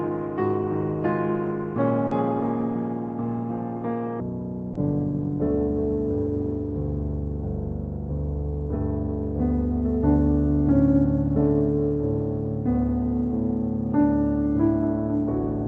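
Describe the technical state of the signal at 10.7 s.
At 10.7 s the audio is inside a section at the wrong speed, spanning 4.20 s to the end. Playback runs at 0.525 times the recorded rate, likely from a wrong clock, so the sound is slowed by nearly half and dropped about ten semitones, deep and dragging.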